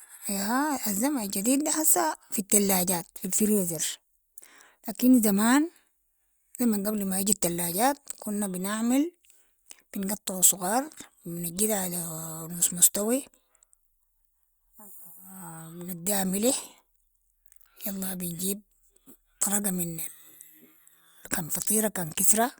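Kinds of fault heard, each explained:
No problems stood out on listening to this speech recording.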